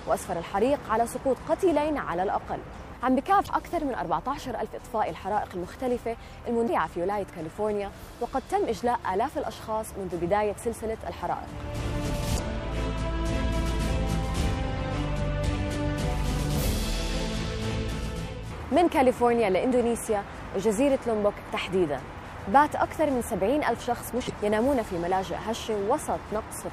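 Four short glitches break up the audio at 3.44 to 3.48 s, 6.65 to 6.70 s, 12.35 to 12.39 s and 24.26 to 24.30 s, each lasting about 45 ms. They are damaged data in a compressed stream. Corrupted bytes reach the decoder, which misreads the frames at those points, briefly loses sync and scans for the next valid frame header. Each event is a brief chirp or blip before clean decoding resumes.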